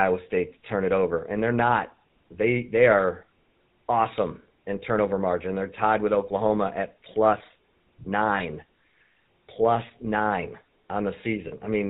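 Right from the start the whole thing is coloured by the GSM full-rate codec. The speech has that buzzy, gravelly edge you get when the vocal tract is modelled and driven by a sparse, regularly spaced pulse train, and nothing makes it past 4 kHz, so it's dull and boxy on top. The damage is plainly audible all the way through, and the character fits the 13 kbps full-rate coder.

Then there are two spots of lost GSM frames. At 8.38 to 8.41 s the decoder has nothing valid to work with, so it repeats the last good frame's settings. You hear a brief rough, metallic ring for about 20 ms, which suggests a single dropped frame. The second, at 11.48 to 11.53 s, lasts about 40 ms. It's the same smeared, tinny hold, just twice as long, consistent with two frames in a row.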